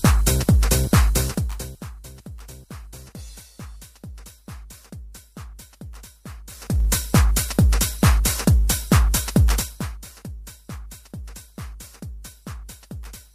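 Zipper noise runs from 6.46 to 6.85 s. The level moves by roughly 20 dB in unsmoothed 1 dB steps, around 40 per second. Each jump leaves a small click, so a rapid ticking zip rides on the sound during the change.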